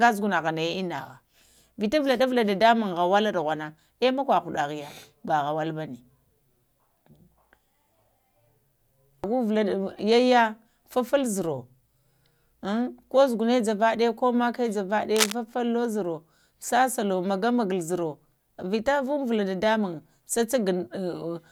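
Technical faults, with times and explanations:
15.16–15.32 s, cable scratch noise: for about 0.16 s a dense, ragged burst of scratching noise sits over the speech, roughly as loud as the speech itself. The likely cause is a worn cable, connector or control being moved, so that its contact resistance fluctuated rapidly while it carried a DC voltage. Those fast, irregular resistance changes turn that DC voltage into uneven noise bursts added to the signal, which the ear hears as rustling or crackling rather than a single click.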